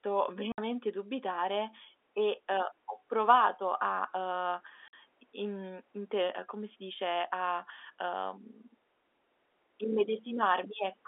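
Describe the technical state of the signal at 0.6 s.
Packet loss filled with silence leaves a 60 ms gap from 0.52 to 0.58 s, just before "dubitare e uhm ho". It fits six 10 ms packets. The edges are hard.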